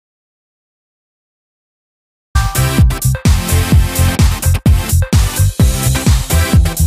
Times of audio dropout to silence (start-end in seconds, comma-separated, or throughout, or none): 0.00-2.35